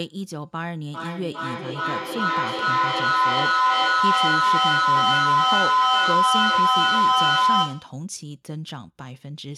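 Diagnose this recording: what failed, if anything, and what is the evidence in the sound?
A feedback howl runs from 0.91 s to 8.06 s, a failure in the acoustic path of the call: two devices in the same room form a microphone-to-loudspeaker loop with gain above unity, so each pass returns louder. The sound narrows to a tone around 1 kHz that rises to about 10 dB above the speech, with repeats roughly every 400 ms, the loop's round-trip delay. On a spectrogram this shows as a thickening horizontal line near 1 kHz. The waveform envelope swells to about 10 dB above the speech.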